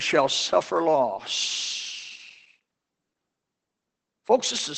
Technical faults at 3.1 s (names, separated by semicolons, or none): Opus voice compression